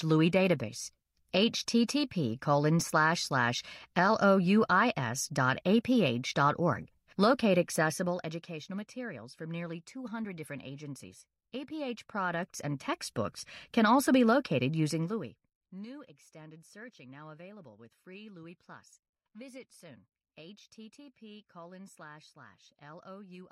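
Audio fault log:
7.76–8.58 s, 11.68–13.14 s and 14.8–15.7 s, zipper noise: the level falls by roughly 15 dB just before "materials from nearly", rises by roughly 15 dB between "different agencies" and "can also be located", then falls by roughly 25 dB after it. Each change comes in unsmoothed steps of up to about 1 dB, about 50 per second, and every step leaves a small click. That ticking on the fade sets it apart from a clean fader move.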